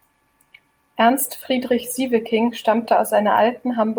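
Nothing in this speech recording stands out as a technical fault; it simply runs along with no problems to point at.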